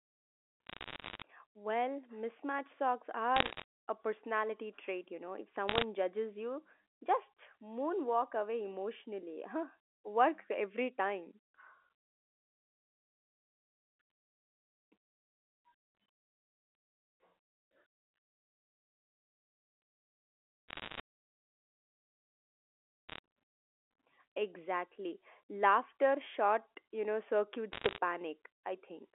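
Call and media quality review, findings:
Bit errors on a digital phone line: sharp ticks and crackle over the speech at 0.67–1.22 s, 3.36–3.64 s, 5.68–5.84 s, 20.69–21.0 s, 23.09–23.18 s, 27.73–27.98 s. Digital phone line. Flipped bits in the G.711 mu-law stream, at a rate of up to about 1 percent, corrupt single samples.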